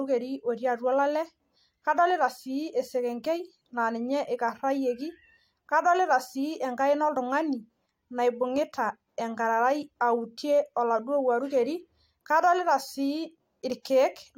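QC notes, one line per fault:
No technical faults can be heard in the signal at any point.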